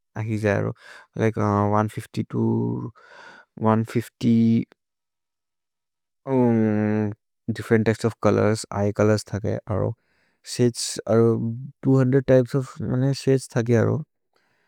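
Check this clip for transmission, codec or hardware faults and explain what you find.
Nothing stood out on listening to the speech in this recording.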